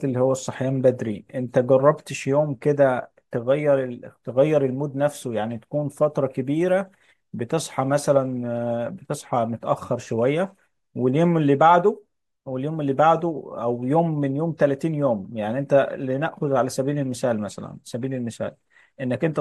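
A speech recording with no technical faults to report. Nothing in it calls for a time or a cause.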